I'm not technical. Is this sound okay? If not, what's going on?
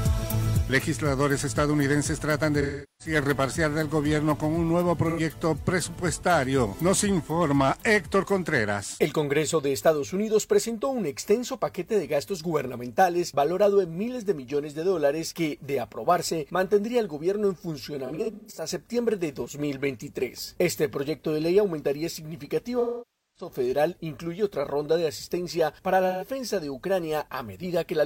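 No. There is AAC frame loss with concealment at 2.61–3.15, 5.09–5.20, 18.06–18.68, 22.79–23.49 and 26.08–26.28 s. Unlike a clean dropout, the missing audio is patched with smeared, blurry sound rather than silence.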